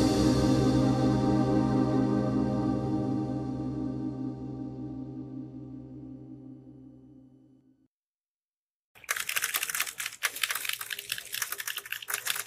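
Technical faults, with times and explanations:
Throughout, doubled audio track: a second full-band copy trails the original by roughly a third of a second, about 5 dB quieter, with no decay or room colour. It's likely the same signal captured twice, once through a slower path, so everything arrives in a flat echo.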